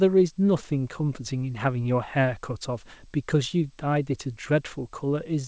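A speech recording carried over a call path whose audio stops at about 8 kHz, with nothing technically wrong with it, so there are no times or causes to give.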